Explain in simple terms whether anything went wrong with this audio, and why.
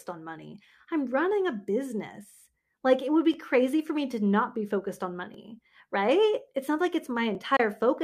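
Clicks or stutters break into the speech at 3.34 s (between "it would be" and "crazy for me to"), 5.34 s (after "not be focused on") and 7.35 s (after "not like"). This is overlapping chunks: the audio was handled in 2-second pieces, and each join replays about 7 ms.

At 7.56 to 7.60 s the sound cuts out for about 23 ms, then carries on as if it had kept playing. The likely cause is a Bluetooth dropout, where a single lost packet fits the gap.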